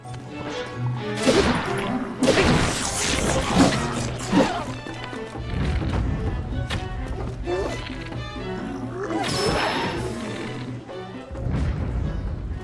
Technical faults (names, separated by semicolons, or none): none